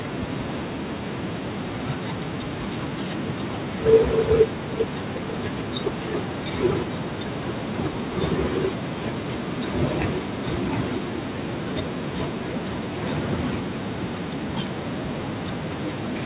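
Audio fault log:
No fault is heard in the speech. It carries the narrow band of a phone call, with nothing above 4 kHz and a grain of coding noise, which fits a standard G.711 A-law call path.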